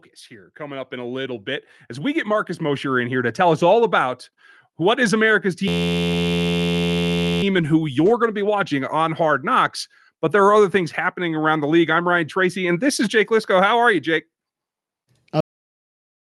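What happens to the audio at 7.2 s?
A system hang loop is under way at 7.2 s; it runs from 5.68 s to 7.43 s and breaks off just before "and who you're going". The system froze while the sound hardware kept replaying the same ring buffer, so one 11.6 ms slice of audio repeats back to back, which fits a 512-sample buffer. Cycling about 86 times a second for nearly two seconds, it turns into a steady, pitched buzz in place of the speech.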